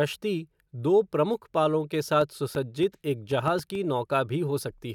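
A train of clicks runs from 2.21 to 3.76 s in this speech clip, starting just after "दो प्रमुख पालों के". Around seven similar pulses arrive at an uneven pace, averaging 3.9 per second, and they peak at roughly the level of the speech itself, so they tick clearly over the sound and through its gaps. The likely cause is interference from nearby equipment or a faulty connection or power supply injecting short repeated pulses into the signal path.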